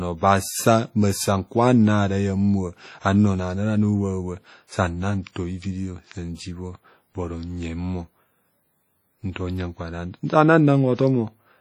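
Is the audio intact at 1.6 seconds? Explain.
No. At 1.6 seconds the speech carries heavy damage from likely WMA compression, present throughout the clip. Long transform blocks smear quantisation noise over tens of milliseconds, and weak spectral lines are dropped, which fits a low bitrate near 32 kbps. It sounds ringing and washy, with hiss that breathes with the signal.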